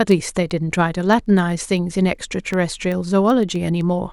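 From 0.12 s to 4.07 s, the speech carries word clock ticks. They are sharp clicks at a steady pace, roughly every 0.15 s, around thirty in all. Their strength varies. The receiving device runs on its own clock instead of locking to the sender's. The two clocks drift apart, by something like 200 parts per million. Each time they slip past each other, a few samples are misread, which fits one sample dropped or repeated per tick.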